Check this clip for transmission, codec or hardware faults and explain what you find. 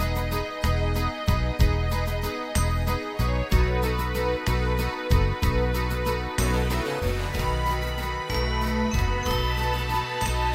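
One fault is present: from 6.99 s to the end at 10.55 s, the sound doubles, with every onset followed by a second copy at equal strength, like a tight slap echo trailing the original by about 46 ms. This is channel delay (doubling). One channel is running late by a long buffer, about 46.44 ms, which fits a 2048-sample buffer, and when both channels are summed to mono the late copy sits apart from the early one rather than blending with it.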